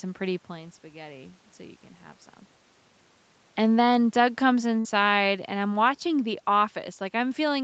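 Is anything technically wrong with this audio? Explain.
Yes, the speech has two faults, one gradual and one sudden.

Automatic gain falling, from 3.59 s to the end: the gain control judged the input too loud, or its background noise too strong, and kept easing its gain down. The voice and the room noise behind it sink together, so the level drops even in pauses. On a waveform, the envelope of both speech peaks and the noise floor tapers steadily across the last four seconds. A spectrogram shows the whole picture, up to the 8 kHz band edge, darkening uniformly.

Burst of packet loss, 4.79 to 4.87 s: a run of audio never arrived in time to be played. The receiver stretched the last sound it had over about 54 ms, fading it out, and then resumed with roughly 60 ms of the speech simply gone. You hear a brief held buzz or hiss, then a jump ahead. The waveform shows the last sound held and decaying, and then an abrupt discontinuity where playback picks up.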